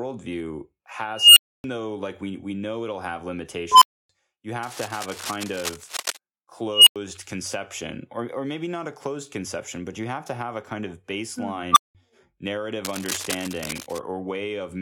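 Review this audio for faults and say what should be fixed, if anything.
An unstable filter fires four times: at 1.15 to 1.64 s (ending just before "though like we we"), 3.72 to 4.09 s (just after "we know it'll have"), 6.72 to 6.96 s (before "conception or or maybe") and 11.72 to 11.95 s. Each time a tone, near 3 kHz in the first and third and near 1 kHz in the others, swells over 46 to 218 ms. It clips, then drops to 93 to 279 ms of silence as the runaway recursive filter overflows and resets. Unlike feedback howl, each tone ends abruptly in dead silence instead of ringing down. Clamp or validate the filter coefficients so the poles stay inside the unit circle.

Cable scratch noise runs from 4.63 to 6.17 s and from 12.85 to 13.99 s. Dense, uneven rustling sits about 5 dB below the speech, likely from a worn cable or connector whose contact resistance fluctuates as it moves. Unlike steady hiss or hum, it comes in irregular bursts with gaps. 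Replace or reseat the suspect cable and connectors, and keep them still while recording.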